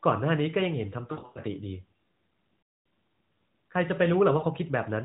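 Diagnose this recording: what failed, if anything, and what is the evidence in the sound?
Lost AMR speech frames at 1.12–1.40 s, 2.62–2.86 s and 4.38–4.45 s, a radio-link fault: frames failed their checksum, so the decoder repeated the last good pitch and vocal tract settings at falling gain. The sound smears, then fades, worst across the 240 ms gap.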